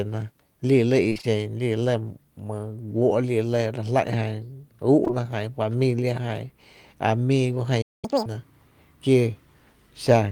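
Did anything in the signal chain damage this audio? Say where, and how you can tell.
Yes. Between 1.09 and 1.25 s the sound turns choppy and robotic. This is repeated packet loss in the network path: four gaps, the longest 24 ms, with concealment filling about half that stretch.

From 5.05 to 5.11 s there is a brief smear. It comes from two back-to-back short concealed packet losses, each missing 20 ms, which the decoder patched by extending the preceding sound.

At 7.81 s the audio cuts to silence for about 212 ms, until 8.05 s. This playback stall likely came from the player's buffer running dry.

From 8.05 to 8.26 s the sound rushes at double speed and jumps roughly ten semitones higher. The player is catching up at higher speed, resampling its backlog to recover the lost time.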